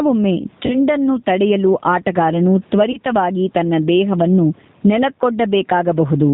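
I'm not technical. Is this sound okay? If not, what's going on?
No. Gain pumping runs through the whole clip. This is likely because the input level was set far too high and an automatic limiter kept pulling it down, which leaves the speech flattened and squashed.

The G.729 codec is also audible throughout. This phone-call compression rebuilds the voice from a simplified model and drops everything above 4 kHz. The speech stays understandable but sounds muffled, slightly rough and a little artificial, like a cheap internet call.

VoIP packet loss concealed by the speech codec shows up twice, from 0.66 to 0.75 s and from 2.92 to 2.98 s. Pieces of the signal went missing, 40 ms in the first case and 20 ms in the second. The decoder filled each hole by stretching the last bit of sound into a brief, fading blur. The voice stays weak or distorted just afterwards.

The faint room noise underneath is part of the recording itself.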